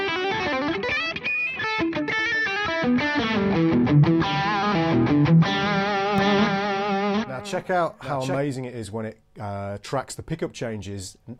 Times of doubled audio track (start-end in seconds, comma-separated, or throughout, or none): 6.18-8.38